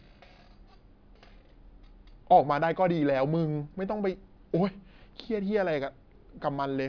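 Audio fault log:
No audible faults anywhere in this speech recording.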